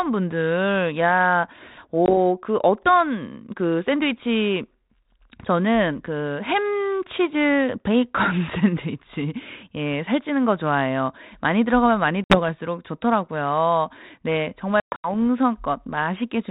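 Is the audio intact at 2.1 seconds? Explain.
No. Around 2.06 to 2.17 s there is packet loss on an ADPCM call: about one packet, some 20 ms of audio, never arrived and was filled with silence. The G.726 decoder, running at 32 kbit/s, then resumed with its adaptive predictor and step size out of step with the sender's. The result is an abrupt, hard-edged gap, after which the speech comes back with slight, brief distortion before the decoder resynchronises.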